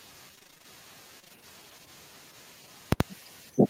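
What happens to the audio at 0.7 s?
Repeated packet loss (robotic sound) runs from 0.35 to 0.66 s, just before 0.7 s. Short dropouts, none longer than 21 ms, keep recurring. Repetition of the preceding sound covers about half of the 0.3 s span. The result is a choppy, robotic stretch with fragments missing.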